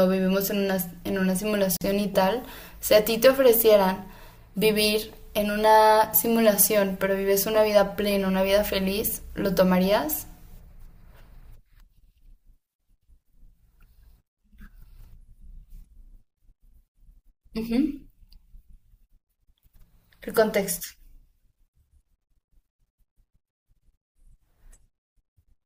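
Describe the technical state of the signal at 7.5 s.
At 7.5 s the speech signal is intact, with no audible dropout, distortion, glitch or other technical fault.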